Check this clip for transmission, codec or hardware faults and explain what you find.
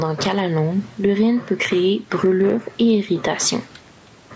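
The clip has one fault, present throughout: gain pumping. The input gain was likely set far too high, so a fast limiter cuts roughly 10 dB on each loud sound. Loud and soft parts end up closer in level, and the sound is squashed. The room noise sits about 41 dB below the speech.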